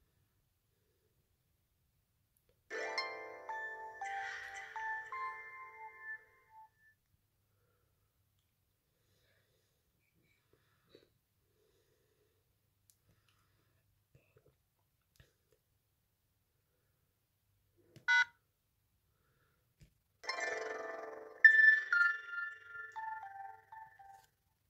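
From 19.74 s to the end of the clip at 24.69 s, the sound carries overlap-add ripple. The audio has been split into windowed frames and reassembled with an overlap whose windows do not add up to a steady gain, so the level swells and dips once per frame, by about 6 dB, at a rate of around 20 Hz. The result is a rapid, rough flutter, a mechanical tremolo riding on everything in that stretch.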